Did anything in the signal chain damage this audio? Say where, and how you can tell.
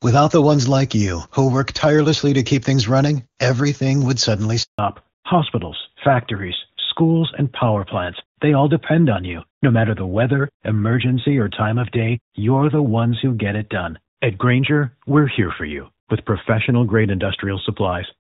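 Yes. Right after "running everything would suddenly", the sound drops to silence from 4.63 to 4.79 s. This is a 160 ms handover gap at the network stage: no frames arrived while the call switched links.

From 4.79 s to the end, the sound turns duller and rougher, with nothing above 4 kHz. This is a fallback to narrowband: the call left HD Voice for an older codec, which fits AMR-NB at 12.2 kbit/s.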